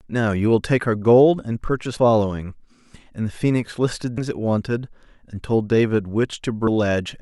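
Compressed frames skipped at 1.97, 4.18 and 6.67 s. Runs of whole 32 ms frames never decode, so the speech jumps ahead by roughly 0.2, 0.3 and 0.4 s.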